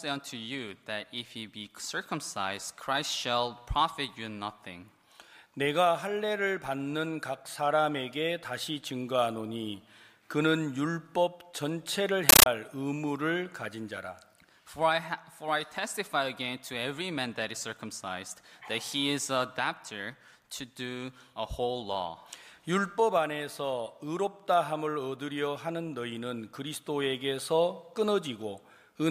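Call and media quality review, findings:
Compressed stream played as audio, 12.29 to 12.46 s. Loud chattering static replaces the programme sound. Probable component: S/PDIF or HDMI output passing an undecoded AC-3 bitstream as PCM. Each frame is heard as a 13.3 ms noise burst followed by silent zero padding, repeating at 31.25 Hz. The burst density fits a 640 kbps stream. Check the passthrough and decode setting on the sink.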